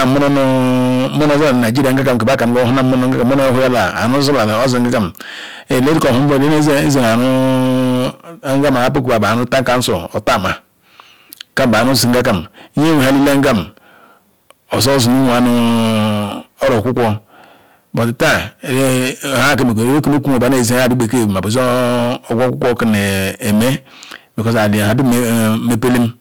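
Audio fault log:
throughout: hard clipping. The speech is driven about 24 dB past what the stage can pass, so roughly a fifth of samples hit the ceiling and peaks are cut flat, adding harsh fuzz to every loud sound. The waveform shows squared-off plateaus, and the spectrogram shows harmonics smeared high.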